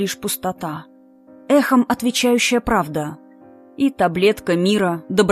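No technical faults can be heard anywhere in the audio.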